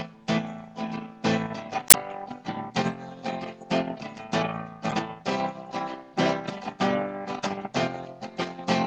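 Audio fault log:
1.87–1.95 s and 4.88–4.94 s, damaged data in a compressed stream: brief glitches as corrupted frames are misread and the decoder loses sync, then resumes at the next valid frame header.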